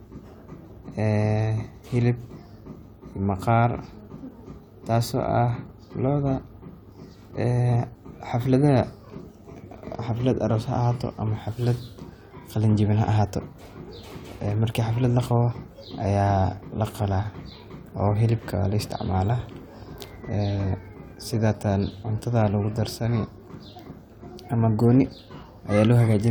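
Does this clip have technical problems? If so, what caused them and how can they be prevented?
No, no technical faults here.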